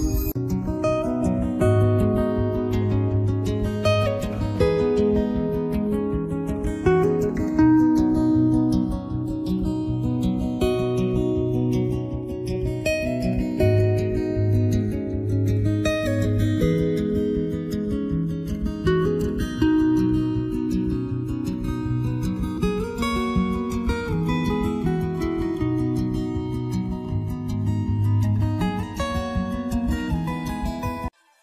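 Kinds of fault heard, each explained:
Channels drifting apart: the left and right channels come from devices on separate clocks, mismatched by around 40 parts per million, so the offset between them creeps steadily to about a millisecond by the end. Summed to mono, the two copies form comb-filter notches that glide slowly down the spectrum, heard throughout as a slow flanging sweep. On a spectrogram, evenly spaced dark notches curve through the frequencies.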